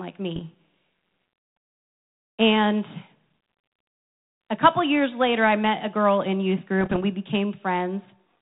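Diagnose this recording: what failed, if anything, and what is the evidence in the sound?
Pops and rough bursts with brief level jumps at 0.36–0.42 s and 6.81–7.03 s, after "a girl in youth": bit errors on the ADPCM link, derailing the decoder's step size and prediction.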